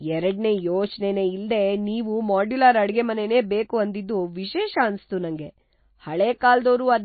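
MP3 compression, throughout: the audio has plainly audible watery, swirling codec damage and nothing above 4.5 kHz, likely from MP3 encoding starved of bits, which fits a bitrate around 24 kbps.

Feedback whistle, from 4.42 s to the end, right after "ಮಾಡ್ಯುಲರ್ ಅಡ್ಗೆಮನೆನೇ ಬೇಕು ಅಂದಿದ್ದು": a single-pitch 5.3 kHz tone rings behind the speech, roughly 10 dB below it, likely as a speaker-to-microphone loop sits at the edge of feedback.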